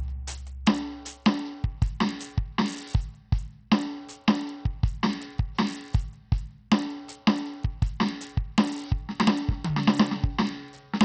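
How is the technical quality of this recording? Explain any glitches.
The technical quality is poor. Heavy codec damage runs through the whole music clip. The treble flickers and drops away, and a gritty grain rides on everything. This is likely Bluetooth SBC compression, at a setting that fits a low rate near 64 kbps. Too few bits leave the top sub-bands starved, and the rest are coarsely quantised. That produces the roughness and aliasing.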